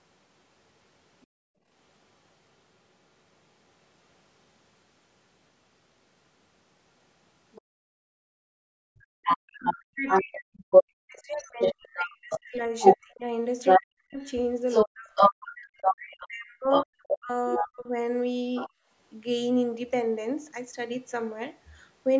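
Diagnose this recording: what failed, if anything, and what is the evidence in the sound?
The other side's voice leaking through sits in the call-processing stage. A second, separate voice appears briefly at 1.21 to 1.27 s and 7.52 to 7.62 s, far below the main talker (roughly 40 and 25 dB down). From 8.99 to 18.7 s it runs continuously at about the talker's own level. This is likely residual loudspeaker echo that the echo canceller failed to subtract from the microphone. Unlike crosstalk in wiring, it tracks the far end's turns and sits next to canceller gating.

The background gated by the echo canceller comes from the same stage. Right after each leak, the room tone drops away: 1.27 to 1.67 s and 7.62 to 8.98 s, each by about 34 dB, then 18.7 to 18.89 s by about 21 dB. The canceller's suppressor clamps the microphone while the loudspeaker plays and releases afterwards. A network dropout would cut everything abruptly, including any echo. 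Here the floor ducks and then recovers, and the ducking is tied to far-end activity.

Speech suppressed in double talk occurs between 9.26 and 17.88 s, while the far-end voice is at full level. The near talker dips, thins and breaks into pieces, losing roughly 40 dB at worst, over several seconds in total. The likely cause is that the echo canceller could not tell its own talker from the echo and attenuated both. Packet loss would not do this. Loss leaves gaps spread across the whole call, whereas these gaps only happen while both sides overlap.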